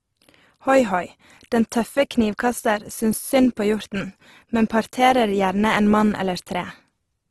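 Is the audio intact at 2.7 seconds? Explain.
No. At 2.7 seconds the speech carries Opus compression damage, and it runs through the whole clip. The sound is grainy and rough, with a noisy texture laid over the voice. Nothing is heard above 12 kHz. This is likely Opus working in its music mode at a low bitrate, around 16 kbps. Short of bits, it keeps each band's energy but fills the detail with folded or noise-like content.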